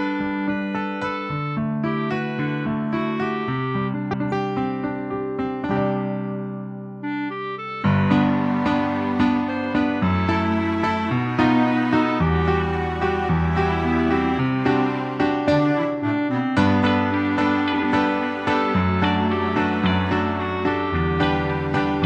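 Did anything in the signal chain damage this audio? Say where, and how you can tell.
Yes. Frames out of order at 3.94 to 4.32 s and 17.73 to 17.80 s: two adjacent blocks, about 186 ms and 46 ms long, swapped places in the network stream, which fits four frames and one frame of about 46 ms. Each stretch plays halves exchanged, a garbled flutter, with no time lost.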